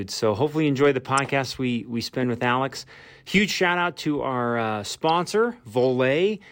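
A speech recording with two short decoded corrupt frames: a brief glitch at 1.18 s and a quieter one at 5.09 s, each spanning about a couple of frames where flipped bits sent energy to the wrong frequencies. A spectrogram shows brief misplaced vertical smears; the waveform shows small spikes.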